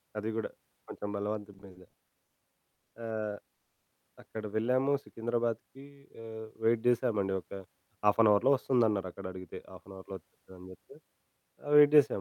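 From 1.53 to 2.38 s the speech drags and stutters through eight short held-over gaps, the longest 110 ms, adding 270 ms in total. These are repeated stalls (stutter): packets kept arriving late, so the jitter buffer kept running dry.

Two call audio freezes follow. At 2.74 to 2.94 s the sound is stretched by 180 ms, fading into 50 ms of silence. At 3.54 to 3.90 s it is held for 340 ms before resuming. Both likely come from delayed packets emptying the buffer.

From 7.13 to 9.89 s the speech runs hurried at about 111% speed with unchanged pitch. This is a jitter buffer speed-up, which trimmed roughly a third of a second of pitch periods to cut excess delay.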